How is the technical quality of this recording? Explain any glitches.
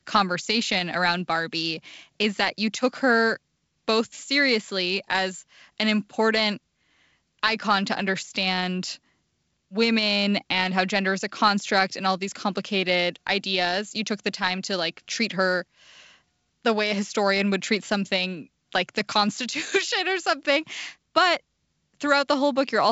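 Nothing stood out on listening, and no glitches were heard: the speech comes through as G.722 wideband telephone audio at 64 kbit/s, with nothing above about 7.7 kHz.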